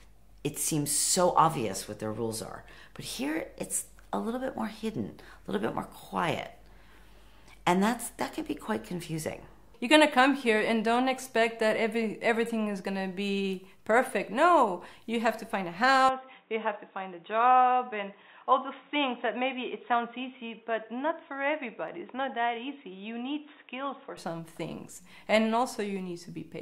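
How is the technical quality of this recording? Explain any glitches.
The recording has one clear fault. From 16.09 to 24.17 s, the input likely switched to a poorer device. Nothing above 3.8 kHz gets through, so the sound turns dull, drops a few dB, and gains a faint new noise floor.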